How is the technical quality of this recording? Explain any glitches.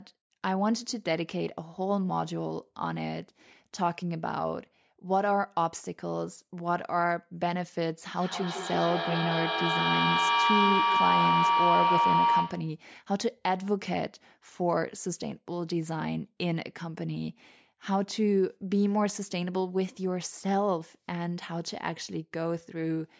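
The recording has one real problem: a feedback howl from 8.15 to 12.8 s. Two devices in the same room joined the call, so the sound kept looping from loudspeaker to microphone, gaining level each pass until it became a tone near 1 kHz. It repeats roughly every 150 ms, matching the loop's delay, and peaks about 3 dB above the speech. The call's microphone processing leaves nothing above 8 kHz, which is normal.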